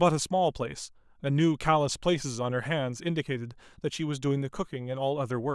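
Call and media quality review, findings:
No faults found.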